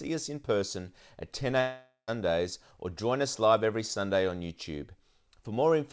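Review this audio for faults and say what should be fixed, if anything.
From 1.60 to 2.10 s the speech breaks off for about half a second, the sign of a long network dropout. Roughly 480 ms of audio never arrived, so the receiver stretched the last sound into a fading buzz and then settled into near-silence for the final 80 ms before the speech resumed with that portion gone. Unlike a brief packet loss, which is smoothed over in a few tens of milliseconds, this gap decays audibly and leaves a hole. Packet delivery over the network is the likely cause; the G.722 band limit at 8 kHz is the normal behaviour of this call path. To prevent it, stabilise the connection and enable redundancy or forward error correction so lost packets can be recovered.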